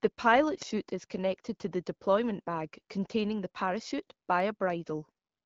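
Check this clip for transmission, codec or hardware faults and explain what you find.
No transmission, codec or hardware faults turn up in this clip.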